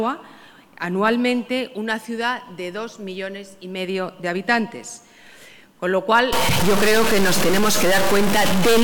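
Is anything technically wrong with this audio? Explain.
Yes. From 6.33 s to the end, harsh buzzy distortion appears and quiet passages fill with loud noise. A stuck bit is the likely cause, adding a large step near -15 dBFS.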